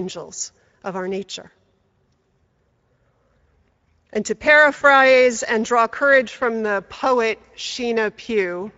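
From the start, the speech carries the Speex codec's damage plainly: a hoarse, noisy grain on voiced sounds where the CELP coder lacks bits for the excitation, with thin, noise-like upper content. The coarseness points to a bitrate of around 17 kbps.

At 4.77–4.83 s, VoIP packet loss concealed by the speech codec appears. About 40 ms of audio, consistent with two lost frames, is replaced by the decoder stretching its last pitch and filter into a brief buzzy tone or coloured noise that fades, and the voice stays weak or distorted just afterward.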